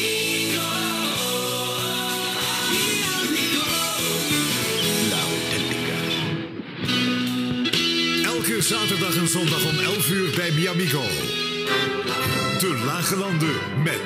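No technical faults are audible anywhere in the audio.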